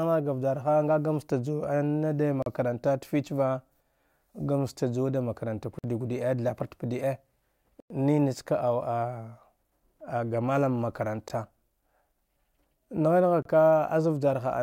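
Speech drops to dead silence at 2.42 s (39 ms), 5.79 s (51 ms), 7.80 s (100 ms), 11.28 s and 13.42 s (29 ms), then resumes. These are likely Bluetooth stalls, with the buffer running dry while packets were resent. Unlike a concealed packet loss, nothing fills the gaps.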